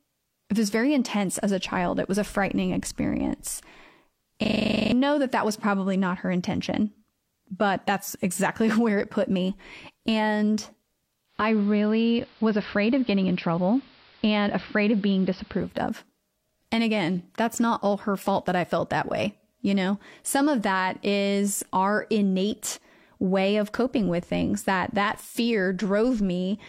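System hang loop at 4.44 to 4.92 s: the playback froze while the hardware replayed one 40 ms slice twelve times, a 25 Hz buzz replacing roughly half a second of speech.

Digital radio blending to analogue from 11.26 to 15.81 s: the receiver cross-faded over 247 ms to the AM broadcast, which adds hiss roughly 30 dB down, and shifts level about 1 dB.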